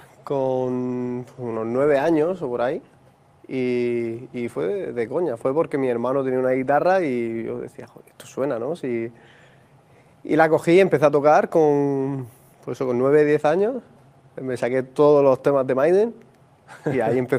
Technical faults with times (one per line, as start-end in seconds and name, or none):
none